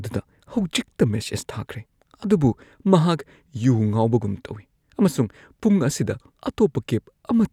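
No technical faults occur at any point in the recording.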